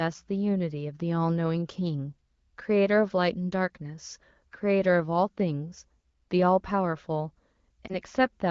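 A lost AMR speech frame at 7.87 to 7.91 s: one 20 ms frame failed its check, so the decoder patched it from the previous frame, leaving a brief dip.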